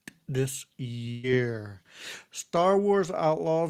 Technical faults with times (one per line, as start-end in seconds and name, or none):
1.11-1.25 burst of packet loss